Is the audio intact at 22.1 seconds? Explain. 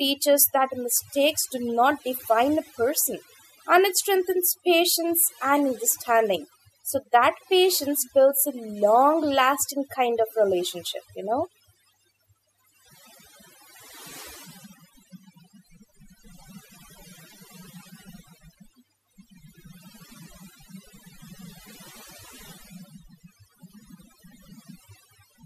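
No. At 22.1 seconds, as throughout the clip, overdone noise removal is audible: bands near the noise estimate are cut off along with quiet speech detail, leaving the voice over near-silence with twinkling specks. A spectrogram shows blank gaps dotted with isolated bright flecks.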